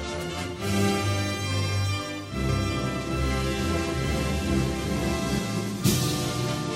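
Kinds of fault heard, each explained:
Doubled audio track: From 2.49 s to 5.39 s a second full-band copy runs about 0.7 s behind, roughly 5 dB quieter, with no decay or room colour and abrupt edges, likely from a slower second capture path or an edit holding two offset copies.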